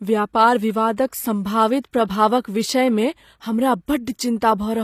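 Throughout the speech the treble sounds false: s sounds come out gritty and lispy, with a metallic sheen, and the damage is plainly audible. Nothing reaches above 15 kHz. This is likely HE-AAC compression at a low rate, around 24 kbps by the sound of it. The encoder kept only the lower spectrum and rebuilt the top by copying lower bands upward under a coarse envelope, so the upper harmonics no longer line up with the real ones.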